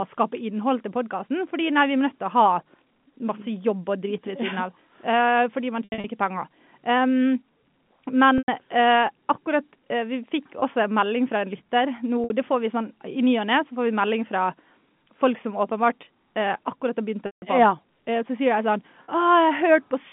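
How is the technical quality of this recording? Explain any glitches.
It's a telephone-band speech recording with six dropouts, all packet loss with pitch repetition. Underneath them, the G.711 telephone coding sits in its usual 150 Hz to 3.5 kHz band without obvious trouble.

The gaps fall at 5.84–6.04 s (160 ms lost in bits across 200 ms, the longest run 80 ms), 8.38–8.48 s (100 ms), 10.60–10.62 s (20 ms), 12.24–12.30 s (60 ms), 17.26–17.42 s (160 ms) and 19.04–19.08 s (40 ms). The sizes step in 20 ms units, which fits 20 ms packets. When a packet goes missing, the receiver loops the last pitch cycle to cover it and fades that out. The short ones come across as a brief held, buzzy bit. The 100 and 160 ms ones thin toward silence before the speech cross-fades back in.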